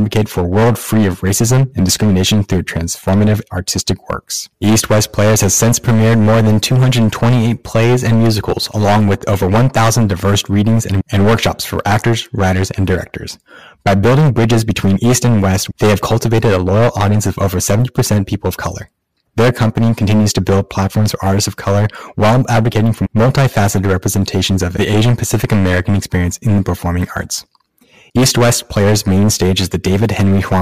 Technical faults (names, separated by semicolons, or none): hard clipping